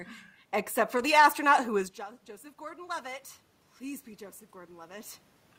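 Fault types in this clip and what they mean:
Short stall from a late packet: just after "except for" and before "the astronaut who is", around 0.97 to 1.01 s, a late packet emptied the jitter buffer, so the last sound is held about 16 ms. Nothing is lost, unlike a dropout, but the delay grows 16 ms.
Automatic gain rising: from about 1.96 to 5.25 s, after "the astronaut who is", the talker moves away and the input falls about 21 dB. The gain control then slowly adds about 7 dB, and the room noise swells with the voice, which a talker moving alone would not cause.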